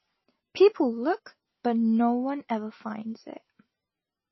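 From start to finish, the speech carries plainly audible damage, likely from MP3 compression. Nothing sounds above about 5.8 kHz, so the treble is cut flat. Weak detail flickers between frames and sounds watery. The heavy loss fits a very low bitrate.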